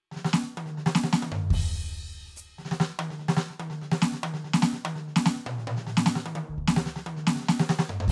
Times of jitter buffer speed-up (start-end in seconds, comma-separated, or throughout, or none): none